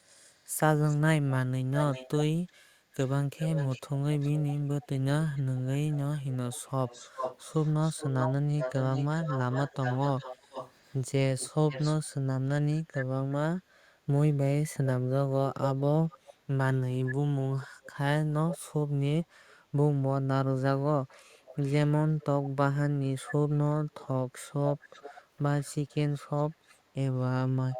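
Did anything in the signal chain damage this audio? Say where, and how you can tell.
Yes. There is an echo leak at the call-processing stage. A delayed copy of the speech, about 0.39 to 0.46 s late and roughly 5 to 35 dB down, runs from 0.05 to 12.06 s and recurs at 12.9, 15.6–16.3, 17.1–17.9, 18.5, 19.5, 21.3–22.5 and 23.3 s to the end. The far end's echo canceller likely left its loudspeaker pickup in the return path.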